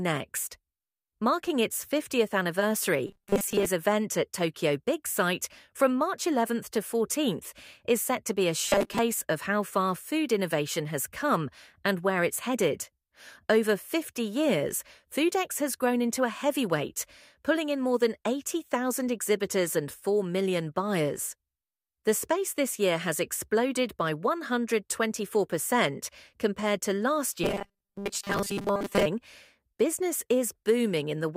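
From 3.07 to 3.66 s, 8.64 to 8.99 s and 27.44 to 29.06 s, the sound hardens into a fixed, metallic 200 Hz buzz. This is robotic sound, likely from repeating a 5 ms buffer in place of much of the real audio. Unlike dropouts, nothing falls silent.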